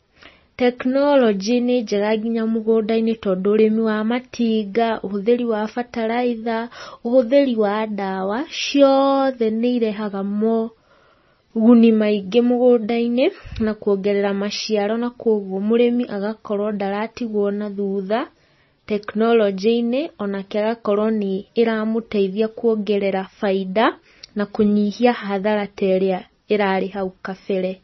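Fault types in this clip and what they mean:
MP3 compression: The treble stops dead at about 5.9 kHz, and the speech has that watery, swirly quality, with s sounds going chirpy and metallic and consonant onsets smearing. That's the encoder running out of bits, so it cuts the top off and lets quiet frequency lines drop in and out from frame to frame. The damage is heavy and runs the whole way through, which points to a very low bitrate, likely around 24 kbps MP3.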